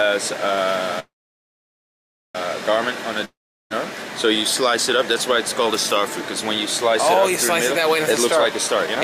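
A short piece of call audio shows three network-related faults. From 0.99 to 2.37 s there is a call audio freeze: the last sound is carried on briefly as a fading buzz, then about 1.27 s of near silence fills the gap, and the audio resumes exactly where it left off. Nothing is skipped, but everything after this point arrives roughly 1.35 s later than it should, which points to packets likely being held up in transit until the jitter buffer ran dry. From 3.25 to 3.72 s a long network dropout sounds similar at first, with a fading tail and then about 0.38 s of quiet. The difference is what happens when the sound returns: it picks up further along, and roughly 0.46 s of audio is simply gone, so the timeline stays the same and content is lost instead of a gap being inserted. The likely cause is that audio never reached the receiver for that span. From 8.36 to 8.97 s a jitter buffer speed-up makes the sound run at about 111% of normal speed. 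The pitch stays put, so it comes across as hurried rather than higher, unlike a simple faster playback. That fits a receiver trimming a backlog by removing tiny pitch-period slices, around 70 ms in total.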